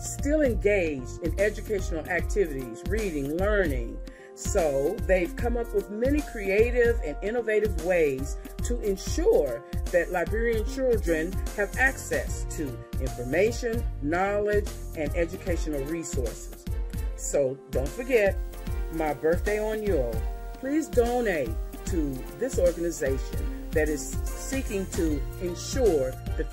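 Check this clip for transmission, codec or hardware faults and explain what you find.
There's one fault here, a video or display buzz running from about 18.36 s to 25.42 s. A screen or video cable is leaking into the audio path, so you get a buzz at the 50 Hz field rate with a gritty hash riding on top. There's also a thin, very high whine at 15.6 kHz from the line scan. The whole thing sits a fair way under the programme level.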